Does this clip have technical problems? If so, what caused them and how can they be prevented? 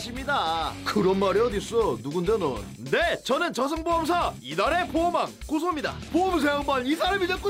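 No, no technical faults are audible.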